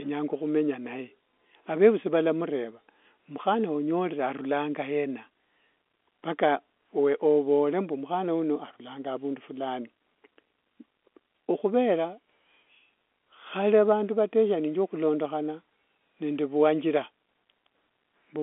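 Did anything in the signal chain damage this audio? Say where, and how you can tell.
No, no damage found.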